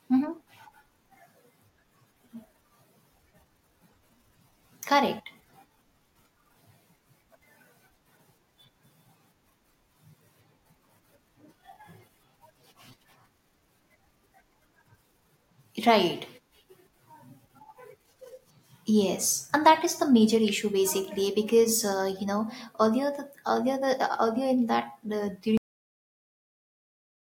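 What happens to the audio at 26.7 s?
At 26.7 s there is nothing to hear, because the clip has a cut-off end. The final stretch of audio was never written out or played, so the recording ends while a sound is still in progress. Right after "earlier in that the", at 25.57 s, the speech stops mid-utterance with no natural decay and falls straight into digital silence. That silence lasts from 25.57 s to the end of the clip, so it covers 26.7 s.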